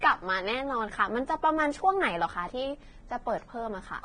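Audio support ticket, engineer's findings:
Speech, whole clip. Hissy, grainy treble. Sibilants smeared into noise. Consonant onsets blurred. Voiced tones roughened. Band empty above 9.7 kHz. Likely Vorbis compression, heavily damaged. Encoder dropped its cut-off and quantised the remaining treble so coarsely that detail became noise of similar energy. Fits a low bitrate around 22 kbps. Check encoder quality setting upstream.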